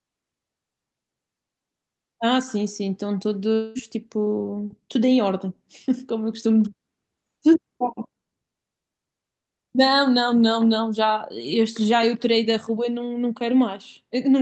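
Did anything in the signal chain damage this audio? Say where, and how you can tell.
Yes, at the network stage. From 3.55 to 3.78 s the sound turns into a smeared buzz that carries on for about 0.2 s and never drops to silence, then speech resumes with that piece gone. That's likely a long network dropout, with the receiver's concealment filling the gap through a call codec that tops out around 8 kHz.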